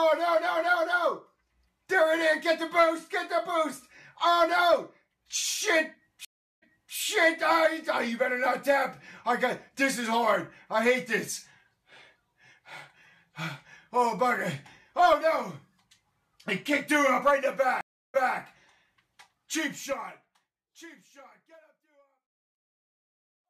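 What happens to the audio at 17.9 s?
A stream reconnect runs from 17.81 to 18.37 s. The connection dropped, leaving about 330 ms of silence, and a fresh decoder picked the stream back up 232 ms earlier than where it broke off. That short stretch repeats, entering softly with a fade-in.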